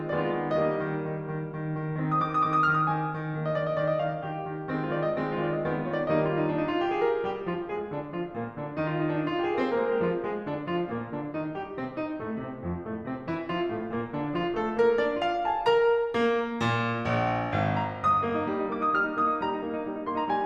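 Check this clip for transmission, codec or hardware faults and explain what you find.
I hear nothing wrong anywhere in this music. There is nothing to report.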